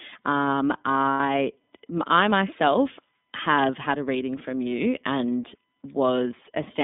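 Throughout, the speech carries plainly audible iLBC codec damage. The band runs only from about 200 Hz to 3.6 kHz, and the roughness and synthetic edge, which fits 30 ms frames at 13.33 kbps, set it apart from a simple band-limit filter.

From 1.13 to 1.20 s, lost iLBC frames leave a 60 ms gap, matching two 30 ms frames. The decoder fills it by repeating the last pitch cycle mixed with noise, so it sounds like a held buzzy or breathy vowel rather than silence or a click. The speech recovers almost at once afterwards, because each frame decodes on its own.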